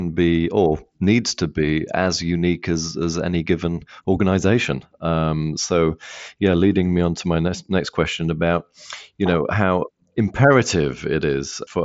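No technical faults detected.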